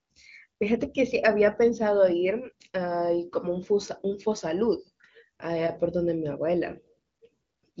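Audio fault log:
Nothing stood out on listening to this speech clip, which comes through the AMR wideband (HD Voice) path at a high rate with its band stopping around 7.5 kHz.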